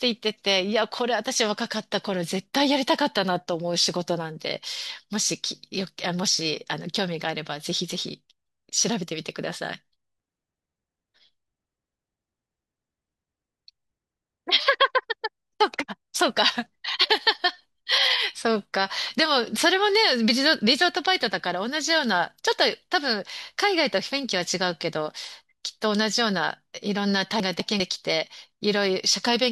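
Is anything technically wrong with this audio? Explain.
Yes. The speech has chunks out of order in two places. From 10.2 to 11.0 s, a 200 ms chunk arrives late and plays after the three chunks that should follow it. From 27.4 to 27.8 s, a 200 ms chunk lands one position late. Nothing is missing, but each displacement creates three abrupt splice points. The result is a brief jumbled, garbled stretch.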